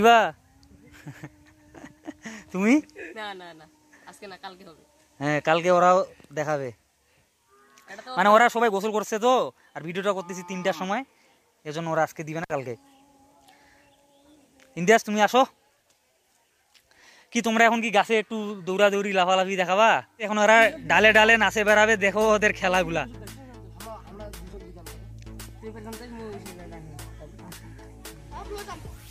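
A loose cable or plug in the signal chain briefly lost contact, an intermittent contact fault, between 12.43 and 12.51 s. The connection stayed open for about 55 ms, and during that gap the audio drops out almost entirely, leaving a faint hiss from the open line. Crackle marks both edges of the dropout, as the contact breaks and then remakes, so the interruption sounds like a short, scratchy cut.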